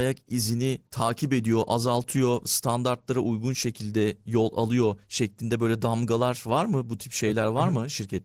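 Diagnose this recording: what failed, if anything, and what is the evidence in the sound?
Codec stage: Opus voice compression throughout, audible as hoarse, slightly robotic speech. It fits hybrid SILK-plus-CELT coding around 16 kbps, with coarse excitation roughening it.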